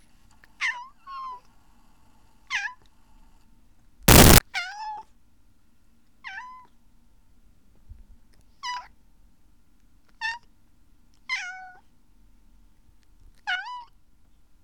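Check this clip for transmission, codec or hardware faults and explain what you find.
One clear fault here. From 4.08 to 4.38 s the samples are built from the wrong bytes. The reader assembles each sample off by a byte or in swapped order, so the jittery low bits land in the loud part of every value. That turns roughly 0.3 s into a burst of loud, harsh broadband noise.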